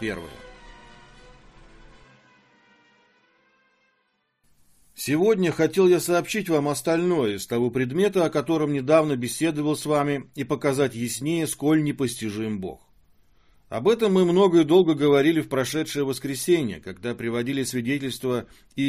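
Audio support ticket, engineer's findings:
No faults found on listening; no dropouts, clicks, distortion or level problems present. No issues to attribute to any component in the chain.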